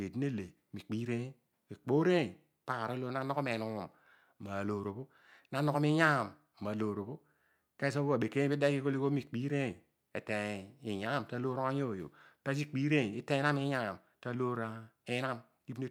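No technical faults can be heard anywhere here.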